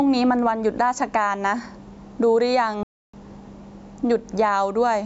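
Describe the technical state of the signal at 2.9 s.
The sound cuts out completely at 2.9 s. It falls silent at 2.83 s and resumes at 3.13 s, a gap of about 0.3 s that breaks the speech in mid-flow. This is a playback stall. The dropout is total silence rather than a fade or a burst of noise, so the player most likely ran out of data or had its output thread blocked, and it produced nothing until it recovered and carried on.

Around that gap the level is also unsteady. The gain swings by roughly 10 dB, and the loud and soft parts sit squashed close together. This is gain pumping, likely from the input gain being set far too high and a fast limiter or compressor repeatedly clamping down on every peak. The call's microphone processing takes out the lowest bass, which is normal.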